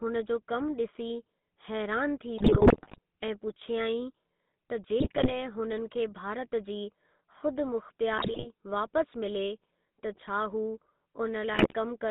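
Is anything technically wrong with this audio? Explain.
Yes. Two faults are audible.

The whole clip runs through the GSM full-rate codec. Sparse pulses drive a vocal-tract model, so the speech sounds buzzy and gravelly within about 200 Hz to 3.7 kHz.

GSM bit errors strike at 2.38 to 2.99 s, 5.00 to 5.32 s, 8.18 to 8.47 s and 11.54 to 11.74 s. Corrupted decoder values bend the spectrum and level, so the speech squawks, pops and gargles.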